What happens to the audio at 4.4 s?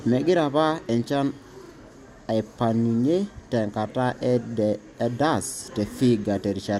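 At 4.4 s the speech carries on without interruption, with no dropout, click or distortion at that point.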